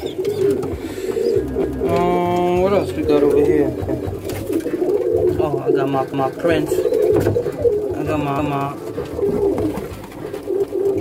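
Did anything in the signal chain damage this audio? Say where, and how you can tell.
Yes, overlapping chunks in the buffering stage. The 2 s blocks overlap, so a 250 ms stretch plays twice, stuttering at 1.64, 3.89, 6.14, 8.39 and 10.64 s.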